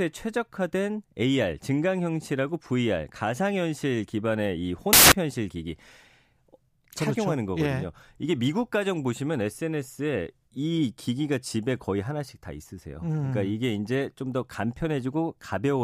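Samples built from the wrong bytes, 4.93 to 5.12 s: for about 0.19 s the reader assembles each speech sample with its bytes misaligned or swapped, so the rapidly changing low bits dominate. The result is a burst of loud, harsh broadband noise.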